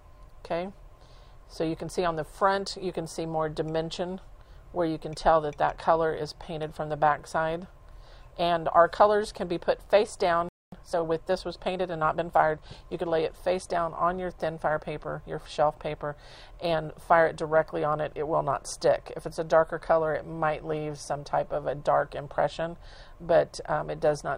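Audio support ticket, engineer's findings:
Playback stall, 10.49–10.72 s: player output likely starved of data or its thread blocked, so nothing was written to the device for about 236 ms. Audible as the sound cutting out mid-flow, a dead gap, then resuming.

Time-compressed catch-up, 10.72–13.06 s: following the stall, player drains its backlog by cutting out small segments and cross-fading the joins, running at 1.1x. Result: audio hurried for about 2.3 s, pitch unchanged, before returning to normal rate.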